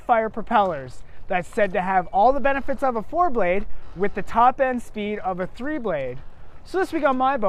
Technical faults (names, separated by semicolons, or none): none